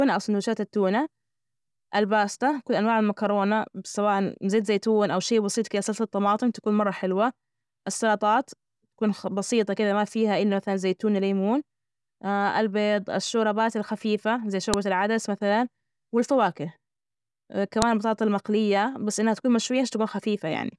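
At 14.74 s and again at 17.82 s there's a sharp, loud snap cutting across the speech. That's a file header played as audio: pieces got joined without stripping their WAV headers, so those bytes come out as a click at each seam.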